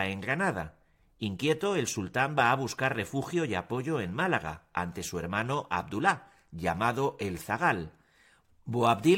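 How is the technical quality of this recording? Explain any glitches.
No faults are audible anywhere in the recording.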